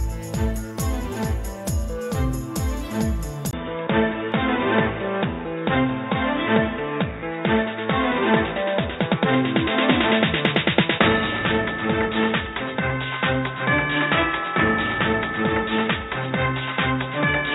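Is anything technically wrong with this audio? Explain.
Yes. At 3.51 s the sound drops out for about 20 ms, then returns duller and boxier until the end. Nothing above 3.8 kHz survives. The level shifts by about 5 dB. A new noise floor appears, roughly 45 dB below the signal. This pattern likely means the input switched to a poorer device mid-recording. That device passes a narrower band and brings its own tone, gain and background noise.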